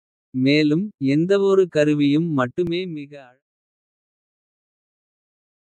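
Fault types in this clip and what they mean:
Overlap between stream segments: Two stream pieces claimed the same time span. The player cut audio that was never doubled. At 2.67 s, between "மேலும் எந்தவொரு கருவியும்" and "மிக அழகான கலை", 9 ms vanish. The waveform jumps, giving a tiny skip.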